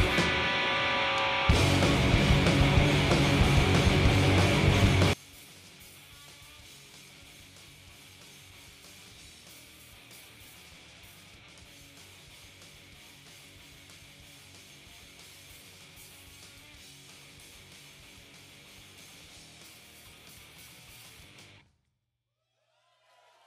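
One channel inverted, from 5.13 s to the end: the sound drops by about 28 dB and stays there. The likely cause is reversed polarity on one stereo channel, so the content both channels share cancels when summed to mono, leaving only their difference.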